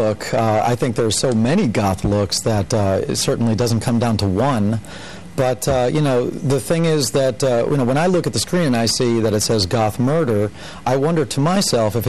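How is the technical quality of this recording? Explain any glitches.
No glitches can be heard anywhere in the recording. Nothing interrupts or disturbs the sound at any point.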